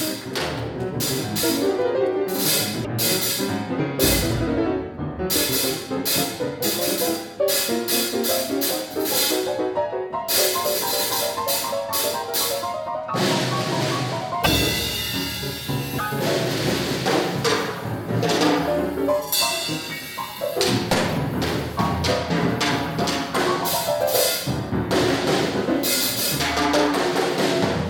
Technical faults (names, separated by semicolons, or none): broken MP3 bit reservoir